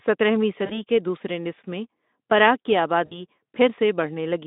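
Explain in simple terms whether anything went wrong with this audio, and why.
VoIP packet loss concealed by the speech codec happens twice, around 0.65 to 0.81 s and 3.05 to 3.16 s. Bits of the call, about 40 ms and then 60 ms, never arrived. The decoder filled the gaps by stretching the last sound into a fading buzz or noise, and the voice stays weak or distorted briefly afterward.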